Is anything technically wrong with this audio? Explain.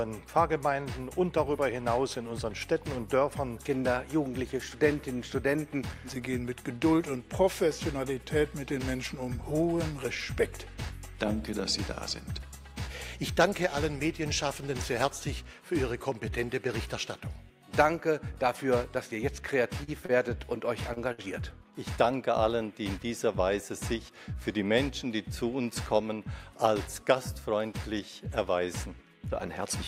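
Yes. Two related jitter-buffer faults affect the audio between about 19.8 and 24.2 seconds.

Short stall from a late packet, at 19.83–19.90 s, 20.06–20.11 s, 20.93–20.98 s and 21.12–21.20 s: each time a packet arrived after its playout deadline, the jitter buffer ran dry, and the receiver stretched the last sound, by 42, 33, 34 and 60 ms, until the data came in. Nothing is lost, but the sound briefly hangs or smears, with a faint buzz or dip, and the added delay accumulates.

Jitter buffer speed-up, from 23.28 to 24.16 s: with surplus audio queued after the stalls, the receiver trimmed short pitch-period-sized pieces repeatedly, removing about 70 ms. Playback runs at 107% speed without any change in pitch, so this stretch sounds slightly hurried and rushed compared with the material around it.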